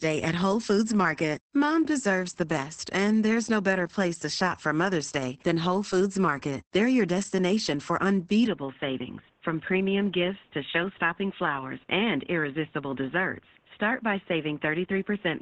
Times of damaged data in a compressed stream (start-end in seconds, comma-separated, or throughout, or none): none